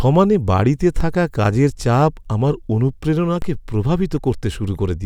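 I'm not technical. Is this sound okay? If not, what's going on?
No. Sample clock jitter runs through the whole recording. The clock that times each sample wobbles by roughly a microsecond, so samples land slightly early or late. That adds a faint hiss or roughness that grows on louder, brighter parts of the speech and disappears in pauses.

DC steps occur at 1.01 s and 3.42 s. At each moment the waveform's resting level suddenly jumps, then drifts back to centre within a fraction of a second. You hear a low thump or click while the speech carries on unaffected.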